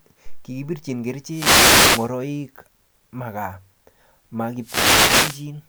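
The radio link of an analogue FM wireless microphone fades twice as reflected signals cancel, letting receiver noise rise over the speech. Each wireless microphone noise hit is a swish of static, from 1.26 to 2.13 s and from 4.60 to 5.47 s.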